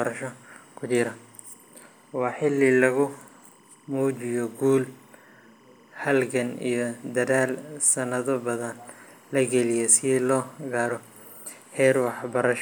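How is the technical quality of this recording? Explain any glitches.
The recording has one problem, present from start to finish: a faint chirping tone runs behind the speech the whole way through.

Timecode bleed, throughout the clip. Linear timecode running at 25 frames per second has leaked from an adjacent track or cable into the audio path. Its square-wave signal flips between tones around 1 and 2 kHz as it encodes each bit, producing a steady, buzzy warble. It sits well beneath the speech, roughly 35 dB down.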